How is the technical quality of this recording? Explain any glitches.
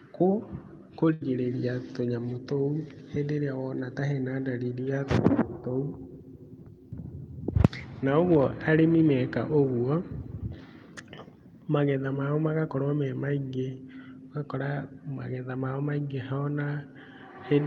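The recording has one clear glitch early on, a burst of packet loss from about 1.13 to 1.23 s. Its top end stops near 12 kHz, consistent with a call codec such as Opus.

At 1.13 s a short run of packets failed to arrive in time. The receiver covered roughly 74 ms by stretching the last received sound and letting it fade, so a brief held buzz or dying hiss replaces the real signal. About 80 ms of the original audio never returns, and the speech jumps ahead at 1.23 s with that stretch simply gone.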